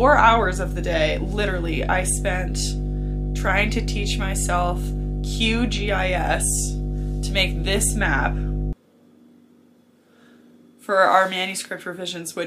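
From the start to 8.73 s there is mains hum: a steady low tone at 50 Hz, with a few low harmonics above it. Power-line current is leaking into the signal through a ground loop or a nearby transformer. The hum sits at roughly the same level as the wanted sound, then stops.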